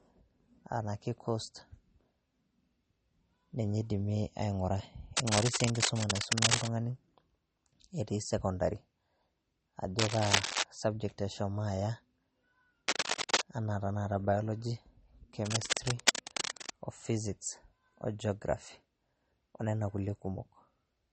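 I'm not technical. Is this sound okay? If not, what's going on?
No. Two problems can be heard in this speech recording.

The first lasts the whole clip and sounds like MP3 compression, most likely saved at a low quality setting. Everything above about 8.4 kHz is missing, so the voice sounds dull, and s sounds come out watery or swirly. Unlike a plain muffled microphone, the damage shifts from moment to moment, with a clearly audible bubbling quality that a simple lack of treble wouldn't give.

The second is cable scratch noise: short bursts of scratching or rustling laid over the voice at 5.17 to 6.69 s, 9.99 to 10.63 s, 12.88 to 13.42 s, and 15.45 to 16.73 s. These are likely caused by a worn cable or plug being moved. In the first burst the scratching is louder than the voice, and in the other three it's about as loud. It differs from steady background hiss because it comes and goes in uneven, crackly patches.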